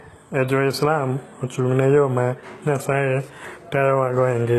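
Speech, likely passed through heavy HE-AAC compression at a very low bitrate, around 16 kbps. The treble is rebuilt from copied lower bands, so sibilants sound gritty and metallic throughout, harmonics don't line up above the crossover, and nothing remains above 12.3 kHz.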